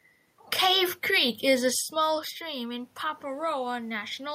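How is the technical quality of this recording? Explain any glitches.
The recording has one glitch, an automatic gain rise in the second half. From 2.01 s, just after "is a", to the end at about 4.35 s, the level swells gradually. After the input dropped by about 11 dB as the talker moved back around 1.5 s, the gain control slowly raised its gain to compensate, lifting the voice and the room noise together.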